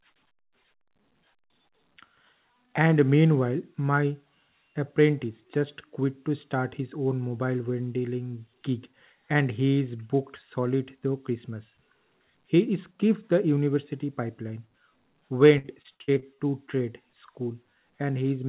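Repeated packet loss (robotic sound) runs from 15.58 to 16.40 s, just before "to trade". Seven brief gaps, the longest 62 ms, are filled by extending the preceding sound, leaving that stretch choppy and robotic.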